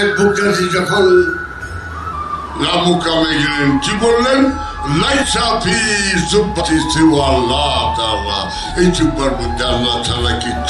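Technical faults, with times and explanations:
2.13 s to the end: section at the wrong speed. From here the sound plays at 0.893 times its recorded speed, dropping about two semitones and dragging. This is likely a clock mismatch during playback or editing. On a spectrogram, harmonics shift downward and stretch in time from 2.13 s.
5.21 s and 6.60 s: compressed frames skipped. The audio jumps ahead by roughly 70 ms and then roughly 150 ms, which fits whole 26.1 ms frames going missing. The spectrogram shows an abrupt content discontinuity at each join.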